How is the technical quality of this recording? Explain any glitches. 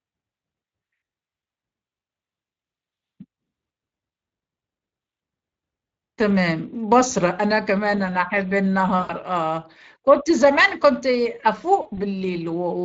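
The speech has plainly audible codec damage throughout, plus three short dropouts.

Speex codec: For the whole clip the speech runs through the Speex codec at a middle setting, which fits roughly 20 kbps. The excitation is coded coarsely, so the voice has a noisy, hoarse grain, and its top band above 8 kHz is only a shaped noise fill.

VoIP packet loss concealed by the speech codec: At 7.09 to 7.13 s (about 20 ms lost), 8.99 to 9.14 s (about 100 ms) and 11.81 to 12.05 s (about 100 ms, scattered over 160 ms, with the longest unbroken loss 40 ms), packets went missing. The decoder filled each gap by repeating its last pitch and filter at falling gain, so the speech smears into a fading buzzy tone or coloured noise. Because each frame builds on the previous one, the voice stays weak or distorted briefly after packets resume.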